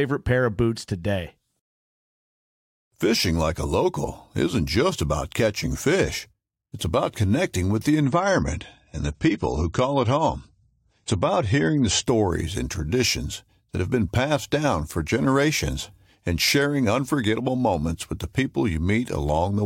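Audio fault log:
8.03–12.03 s, adaptive stream at a lower bitrate: after "about connecting with the", the sound abruptly loses everything above 9 kHz and turns swirly, which fits a switch to 32 kbit/s AAC. No gap, unlike a dropout.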